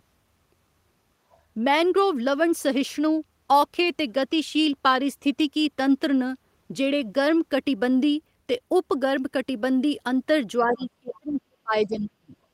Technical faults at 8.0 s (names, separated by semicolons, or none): none